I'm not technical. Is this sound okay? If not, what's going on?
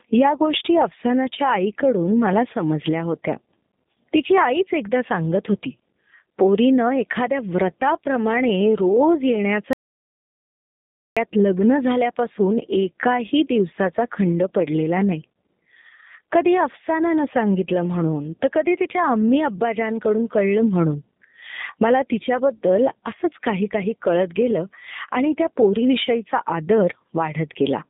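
No. Throughout, the speech has been squeezed through the G.729 codec, a phone-call audio compressor. Nothing above about 3.8 kHz survives, so it sounds thin, and it also has a slightly rough, synthetic edge. A simple muffled recording would sound dull but still natural.

From 9.73 to 11.17 s there is an audio dropout to silence, about 1.4 seconds of total deadness with no background hiss at all, which sets it apart from a natural pause. Whatever was said then is lost, most likely because the input or connection briefly cut out.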